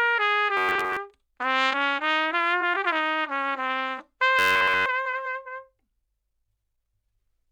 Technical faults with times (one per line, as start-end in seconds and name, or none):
0.57-0.99 robotic sound from repeated short buffers
4.39-4.86 robotic sound from repeated short buffers